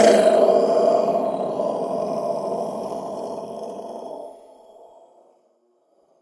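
Sounds, with no technical faults to be heard.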